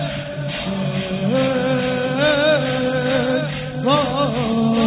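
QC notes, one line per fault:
No fault found; nothing to log.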